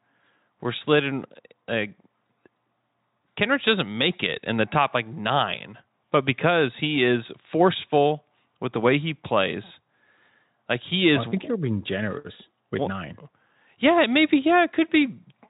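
No technical faults can be heard in the speech, and the Speex coding it passes through leaves at most faint traces of itself.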